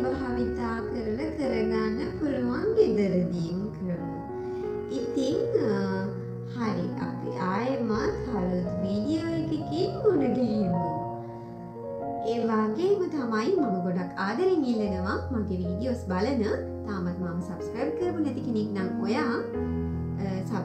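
A time-stretched section runs from the start to 12.94 s, where the audio plays at about 0.61 times its natural pace yet keeps its original pitch, so it sounds drawn out and dragging before the pace jumps back to normal. The likely cause is software lengthening that stretch to fill a set duration, repeating short overlapping fragments rather than resampling, which would have lowered the pitch along with the speed.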